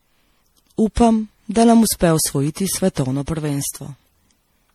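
Generation loss runs through the whole speech clip, leaving the sound swirly, smeared and hollow with blurred attacks. The likely cause is around seven MP3 passes, fitting roughly 64 kbit/s, each requantising on a shifted frame grid so noise and spectral holes accumulate.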